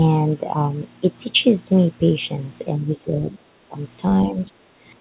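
From 2.77 to 3.74 s, the speech sinks by about 15 dB for roughly a second. It sounds pulled back. At 4.28 to 4.61 s, it drops harder, by about 25 dB, and nearly vanishes for about a third of a second. The likely cause is speech suppressed in double talk. The echo canceller mistook this talker for loudspeaker echo while the far side spoke, and turned the speech down. The sound stays band-limited below 4 kHz throughout, which fits a G.711 A-law call path.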